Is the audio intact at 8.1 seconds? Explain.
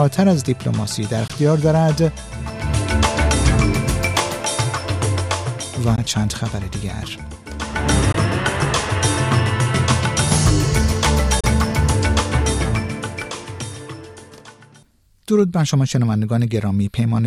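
No. From 8.12 to 8.15 s there is a brief gap consistent with a Bluetooth dropout, likely a single audio packet that reached the headphones too late and was discarded. About 14.5 ms of sound goes missing, heard as a brief silent hole before the audio carries on as though it had kept playing. On a waveform the trace drops flat; a spectrogram shows a thin vertical blank stripe across all frequencies.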